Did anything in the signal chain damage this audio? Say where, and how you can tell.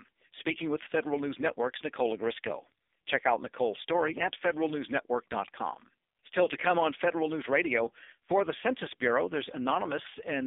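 Yes. AMR narrowband mobile codec, a codec-stage fault throughout: speech is confined to 250 Hz–3.6 kHz and sounds heavily buzzy and synthetic, which fits the 5.9 kbps mode.

Lost AMR speech frames, a network fault, at 6.44–6.47 s: a brief dip or warble as the decoder reused old settings, which fits one lost 20 ms frame.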